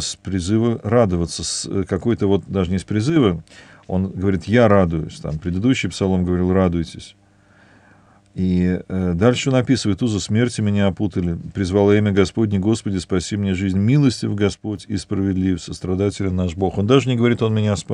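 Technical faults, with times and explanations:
3.10–3.16 s and 14.54–14.77 s, one channel drops out: the sound abruptly falls by about 6 dB and then snaps back, briefly at first (about 65 ms) and for about 230 ms the second time. The likely cause is the loss of one stereo channel. Once the pair is summed to mono, material common to both sides keeps only half its amplitude, which is the 6 dB step, and anything carried only by the missing side vanishes.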